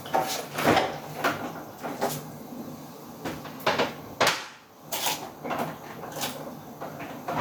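Gain pumping throughout: the gain ducks around 10 dB under loud sounds, likely a fast limiter on excessive gain, not gating.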